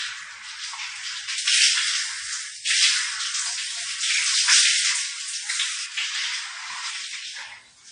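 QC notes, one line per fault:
Throughout: low-bitrate audio saved at a high bitrate. Nothing is present above 9.8 kHz, and smeared, swirly coding artefacts remain. This is likely an early low-bitrate encode, perhaps around 32 kbit/s, later rewrapped as high-bitrate MP3. The larger file cannot restore the removed detail.
1.38–5.86 s: pre-emphasis left on. The treble jumps up, about 14 dB higher at 10 kHz relative to 1 kHz. The shape fits a 75 µs FM curve whose matching cut was never applied. The sound turns thin, harsh and hissy, then returns to normal.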